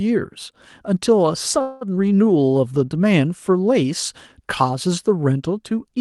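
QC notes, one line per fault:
1.61–1.83 s, call audio freeze: Packets were likely held up in transit, so the jitter buffer ran dry and the receiver had nothing new to play. For about 0.2 s it stretches the last sound into a fading buzz that never drops to silence. When the delayed packets arrive, the speech resumes exactly where it stopped, so nothing is lost. The result is a gap inserted into the speech and a delay of about 0.2 s added to everything after it.
1.95–1.98 s, skip ahead: A short stretch of speech was discarded, either dropped in transit or flushed by the jitter buffer while later audio was already queued, which wins back some of the delay the freeze added. Around 70 ms of speech goes missing, and the two sides are bridged by only about 11 ms of filler. Playback lurches forward almost seamlessly, with a fragment of sound clipped out of the flow.
2.33–2.85 s, jitter buffer slow-down: With the buffer's reserve running low or its target delay just raised, the receiver rebuilt it by repeating single pitch periods many times in a row, adding 67 ms over this half-second. 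The speech runs at about 89% of normal speed while keeping its pitch, so sounds come out drawn-out. Through the call path's codec, the high end also stops at 12 kHz.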